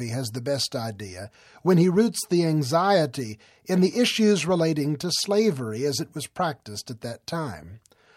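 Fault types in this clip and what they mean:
Corrupt frame decoded: bit errors in compressed frames misplace energy across frequencies, heard as a faint blip at 3.39 s and a louder, brief burst at 5.22–5.25 s.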